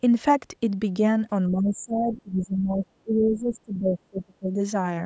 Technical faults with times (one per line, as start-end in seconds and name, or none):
1.50-4.58 speech suppressed in double talk